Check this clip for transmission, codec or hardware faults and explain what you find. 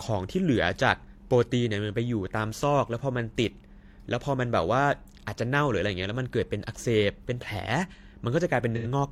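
One codec fault is present, near the end of the speech. From 8.76 to 8.86 s there is AAC frame loss with concealment: about 85 ms of coded audio never arrived, which fits two lost AAC frames. The decoder covered the gap by reusing the last good spectrum, so the speech there turns into a brief smeared, phasey patch. Unlike a plain dropout, it has no hard silence or click, only a blurred stretch of sound.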